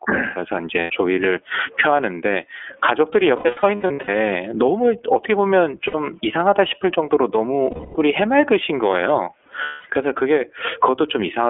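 Throughout the clip the speech is confined to a telephone band of about 300 Hz to 3.4 kHz and sounds slightly rough and synthetic, which is plainly the iLBC codec. Its 30 ms frame structure fits the 13.33 kbps mode. Unlike a muffled low-pass filter, this adds a buzzy, vocoded texture rather than just dullness.

Also present the whole way is gain pumping. The gain swings by around 20 dB, bringing loud and soft parts closer in level and squashing the sound. The likely cause is a fast limiter fighting excessive input gain.

The lost iLBC frames come at 0.81 s (90 ms), from 3.36 to 4.09 s (450 ms lost in pieces of up to about 100 ms each), at 5.87 s (60 ms), at 7.70 s (240 ms) and at 9.63 s (240 ms). In each gap the decoder repeats the last pitch cycle with added noise, so it sounds like a held, breathy vowel rather than silence or a click. Because each frame is decoded independently, the voice recovers almost immediately afterward, without the smeared tail of codecs that depend on earlier frames.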